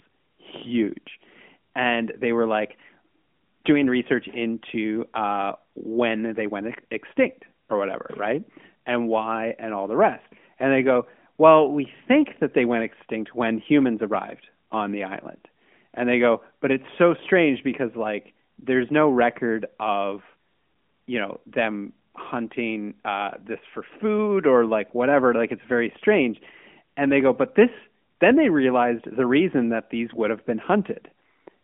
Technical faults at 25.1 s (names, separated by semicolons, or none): none